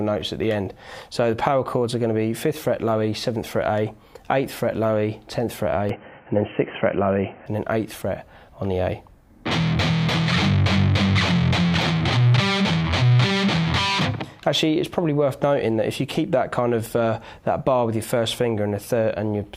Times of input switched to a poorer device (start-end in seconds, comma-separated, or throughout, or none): 5.89-7.46